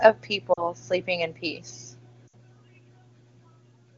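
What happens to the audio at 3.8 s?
Nothing goes wrong at 3.8 s: the speech continues intact through that moment, carried by the AMR wideband (HD Voice) codec at a high enough rate to keep it clear.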